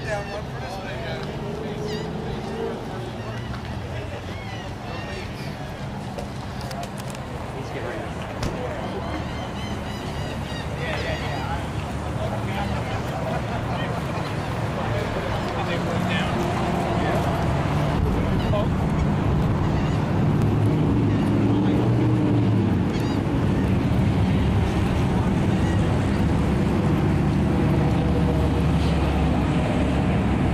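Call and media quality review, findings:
Periodic USB or driver dropouts, 14.43 to 20.42 s. Regular ticks, one about every 1.00 s, around seven in all. Each skips a couple of milliseconds of audio. Probable cause: a background task stalling the USB bus or audio driver at a fixed interval.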